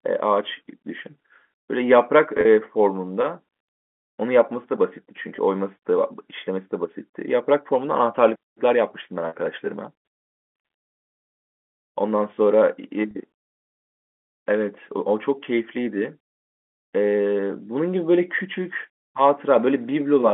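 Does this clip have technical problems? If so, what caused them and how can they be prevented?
Yes. Packet loss with pitch repetition occurs at 2.37 to 2.45 s (50 ms lost, scattered over 80 ms), 5.36 to 5.38 s, 9.28 to 9.33 s and 13.11 to 13.15 s. Each gap was filled by repeating the last pitch period, so it sounds like a brief buzzy hold rather than a silent dropout. Prevention needs a steadier network path or forward error correction.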